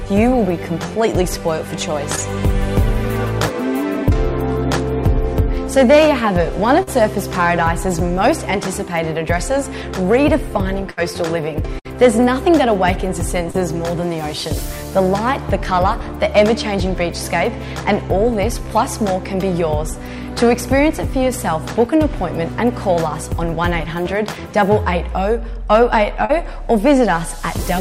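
Around 2.15 s and again at 6.83 s there's short concealed packet loss. Roughly 20 to 40 ms of audio never arrived in time, so the receiver stretched the last bit of sound over the hole, which gives a quick smear or wobble. At 10.91 s and 11.79 s you get a burst of packet loss. About 60 ms goes missing each time, covered by a fading buzz or hiss before the audio picks up further along. The short concealed packet loss comes back at 13.51 s, about 40 ms with a little extra time tacked on, and once more at 26.25 s, again around 40 ms smeared over.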